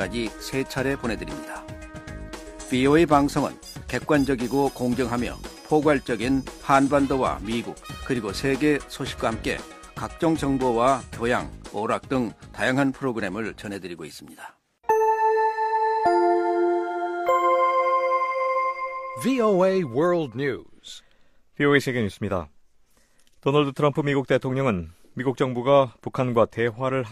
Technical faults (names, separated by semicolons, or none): none